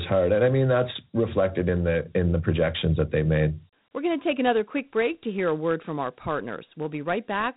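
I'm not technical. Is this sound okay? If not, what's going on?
No. Throughout, the speech has Dialogic VOX ADPCM damage: squeezed into crude 4-bit steps, it sounds gritty and muffled, with nothing above 3.8 kHz.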